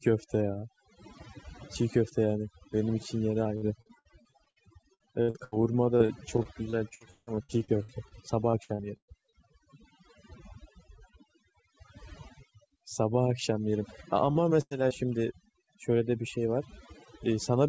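Right through the clip you can hear overdone noise removal: the suppressor was pushed so hard that any band near its noise estimate gets pulled down or dropped, taking quieter parts of the speech with it. The background sits near silent with little twinkling specks.

From 3.44 to 4.58 s, 4.94 to 5.54 s, 5.98 to 8.13 s and 8.51 to 9.34 s there's repeated packet loss with a robotic sound. Holes keep arriving one after another, each patched by stretching the last bit of sound, so roughly a quarter to 40% of those stretches is filler. It comes across choppy, with pieces missing. The longest single hole, about 164 ms, falls in the third stretch.

Later there's short concealed packet loss at 14.32 to 14.37 s and again at 14.89 to 14.92 s. A few hundredths of a second got bridged by continuing the sound, and each one is heard as a quick smear or wobble.

Between those two, from 14.61 to 14.73 s, a burst of packet loss wipes out about 100 ms. 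The receiver holds the last sound as it fades into a buzz or hiss, then jumps ahead with that chunk gone.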